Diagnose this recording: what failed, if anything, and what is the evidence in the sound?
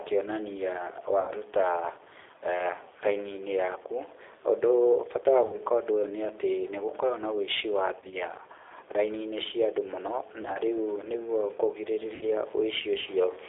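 The speech runs through a G.729 codec at 8 kbit/s for the whole clip. Everything sits between 250 Hz and 3.6 kHz, and the speech has a plainly rough, synthetic edge. The room noise underneath warbles. This is the codec stage, rebuilding speech from a filter, a pitch predictor and sparse pulses.

There is VoIP packet loss concealed by the speech codec at 1.21–1.31 s, 5.46–5.59 s, 8.00–8.15 s, 10.43–10.60 s and 12.15–12.26 s. This is a network fault. Each gap is 60–70 ms of missing audio. At 8.00 s and 10.43 s the losses are scattered, with runs of up to 20 ms. The decoder stretches its last pitch and filter into a fading buzzy tone or coloured noise, and recovery lags afterwards.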